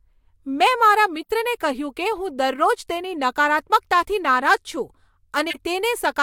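At 1.23–1.30 s, just before "કહ્યું કે હું દરરોજ", and again at 5.50–5.56 s, corrupt frames decoded anyway produce brief chirps: a faint blip, then a louder burst, appearing as short vertical smears of misplaced energy.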